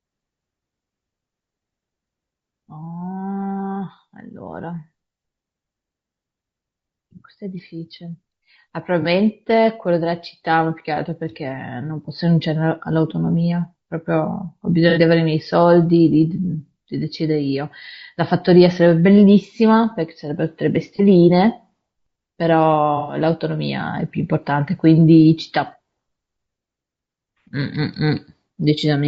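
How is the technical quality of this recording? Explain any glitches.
The speech is consistently degraded by codec damage, with four brief concealed dropouts.

Throughout, the speech sounds rough and grainy, with noise between harmonics and a synthetic top band, likely low-delay AAC compression at roughly 32 kbps.

AAC frame loss with concealment: at 9.02, 14.9, 20.96 and 23.0 to 23.2 s, the decoder filled gaps of about 30, 60, 30 and 120 ms from earlier spectra, leaving smeared, noisy patches.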